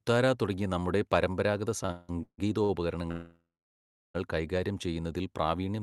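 From 1.83 to 2.71 s the speech shows repeated stalls (stutter): five short gaps, the longest 172 ms, totalling 416 ms and covering nearly half that span. Packets arrived late, the jitter buffer kept emptying, and the receiver stretched the last sound, so delivery drags without losing content.

From 3.11 to 4.16 s a call audio freeze holds playback for 1.04 s. The sound continues briefly as a fading buzz or hiss, then about 0.7 s of silence before speech resumes where it stopped. The likely cause is packets held up in transit, draining the buffer.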